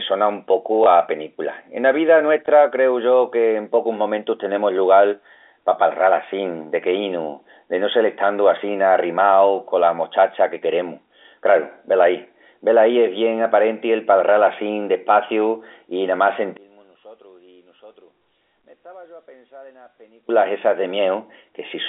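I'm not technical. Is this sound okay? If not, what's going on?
No. Twice near the start, at 0.84 to 0.86 seconds and again at 2.46 to 2.48 seconds, there's a tiny blip or hiccup, like the speech skipped for a split second. This is packet loss with the last packet repeated. The audio travels in small chunks, each 20 milliseconds long. One chunk went missing each time, so the receiving end filled the gap by playing the previous chunk again, which gives a small blip.

The bigger problem comes later. From 16.57 to 20.29 seconds the voice suddenly drops away and becomes very faint, almost disappearing. The likely cause is one channel inverted: one side of the stereo pair is flipped upside down. When both sides are combined into one, as on a phone or a single speaker, the parts that were identical cancel each other out, and the voice sits right in the middle, so it nearly vanishes.

The narrow, phone-line quality heard throughout comes from standard telephone coding, G.711, and isn't part of these faults.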